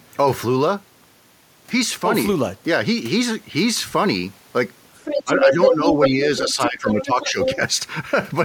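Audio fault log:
4.96 to 5.45 s, 5.62 to 6.08 s, 6.37 to 6.69 s and 6.89 to 7.56 s: other side's voice leaking through. A second voice comes through alongside the talker in four stretches. In the first it is about as loud as the talker. In the second it is somewhat louder. In the last two it is somewhat quieter. The likely cause is the far end playing on a loudspeaker, with the echo canceller leaving part of it in the microphone signal.
5.24 to 6.25 s, 6.46 to 7.39 s and at 7.56 s: speech suppressed in double talk. The talker's level dips while the leaked voice overlaps it. The first dip is shallow and lasts about half a second in total. The second is deeper, about 15 dB at its lowest, and also lasts about half a second. The last is a brief shallow dip. Both sides are sounding together here. The likely cause is the echo canceller failing to separate the talker from the echo and turning both down.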